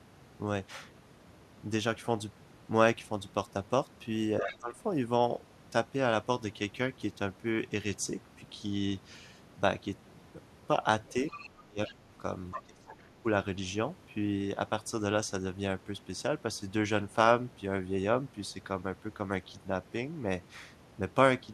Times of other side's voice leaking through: 4.48-4.57, 11.08-11.93, 12.52-12.62

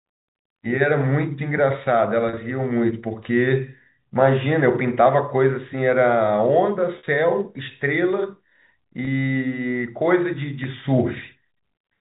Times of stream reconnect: none

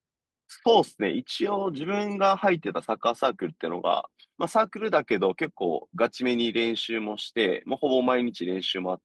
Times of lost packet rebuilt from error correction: 1.55-1.61, 4.61

